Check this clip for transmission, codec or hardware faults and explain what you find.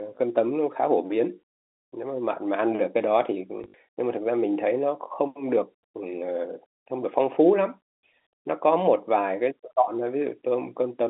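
One fault is audible, a brief dropout-and-repeat event in the speech.

Packet loss with last packet repeated, from 3.58 to 3.74 s. About 100 ms of audio went missing in patches across those 160 ms, the longest gap 60 ms, which points to roughly five lost 20 ms packets. The receiver filled each gap by replaying the previous packet. Those copies seldom join on a pitch period, and the 60 ms run turns into a short robotic stutter buzzing near 50 Hz. The G.711 telephone coding carrying the call just limits the band to about 250 Hz–3.7 kHz.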